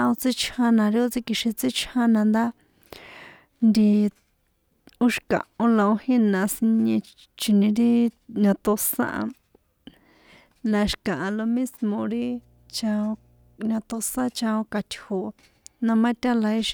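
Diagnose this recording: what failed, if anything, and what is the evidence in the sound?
Mains hum in the analogue wiring: from 12.10 to 13.60 s a steady 60 Hz tone with low harmonics sits well beneath the speech, roughly 35 dB down. A ground loop or nearby transformer is coupling the power line into the signal path for that stretch.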